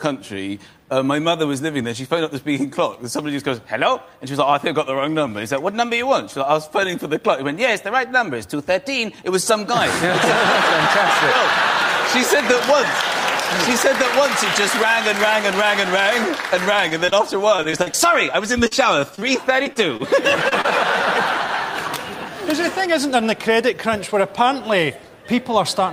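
Repeated packet loss (robotic sound) appears from 16.89 to 17.95 s and again from 18.67 to 20.66 s. In each stretch, short chunks of audio went missing in quick succession, the longest hole about 37 ms in the first and 39 ms in the second. Each hole was patched by extending the preceding sound. Around 17% of the first stretch and 9% of the second is filler. The result is choppy audio with fragments missing.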